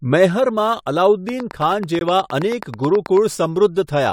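Speech clip carrying sample clock jitter throughout: a roughness around 30 dB below the speech that swells on loud, bright sounds and vanishes in pauses, which rules out a steady noise floor. The jitter points to a clock wandering by a few microseconds. From 1.29 to 3.18 s a regular train of clicks ticks at 9.1 per second, about twenty identical pops a few dB above the speech, continuing through pauses, likely interference from nearby equipment or a faulty connection or power supply. At 1.99 s a hard-edged gap between stream segments inserts about 19 ms of silence at the 2 s segment boundary; unlike a dropout, nothing is missing, and the sound simply resumes late.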